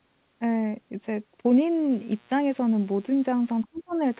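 From 1.89 s to the end, mains buzz sets in: a steady, raspy 60 Hz hum with harmonics stacked above it, sitting about 35 dB below the speech. Spikes from a dimmer, rectifier or unshielded cable are the source. On a spectrogram it appears as evenly spaced horizontal lines at multiples of 60 Hz, running unbroken to the end.

At 3.64 to 3.82 s, a very faint second voice slips in underneath. This is the other side's voice leaking through, likely far-end loudspeaker sound that the echo canceller failed to fully remove from the microphone. A spectrogram shows weak harmonic traces overlapping the main speech.

From 3.65 to 3.99 s, the main speech dips sharply, in places by around 30 dB, for about a third of a second in total. This is speech suppressed in double talk: the canceller, likely unable to separate talker from echo, attenuated both. The waveform shows a sudden notch in the envelope.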